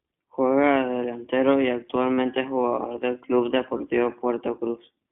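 The speech runs through the iLBC codec throughout, probably in its 15.2 kbps mode. The band is confined to roughly 200 Hz to 3.6 kHz, leaving the voice thin, rough and plainly synthetic. Lost iLBC frames occur at 2.14–2.19 s, just before "es jugador del", and at 3.78–3.81 s. The decoder fills each 40 ms and 20 ms gap by repeating the last pitch cycle with noise, giving a brief buzzy, held vowel before the speech snaps straight back.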